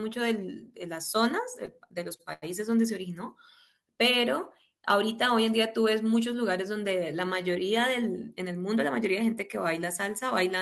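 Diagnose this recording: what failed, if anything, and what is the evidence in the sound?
Network side: three short stalls from a late packet, at 1.65 s, 2.16 s and 2.33 s. The jitter buffer ran dry each time, so the last sound got held for 15, 33 and 90 ms until the packet showed up, then carried on with nothing dropped.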